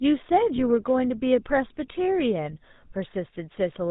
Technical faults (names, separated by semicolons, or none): GSM full-rate codec; lost GSM frames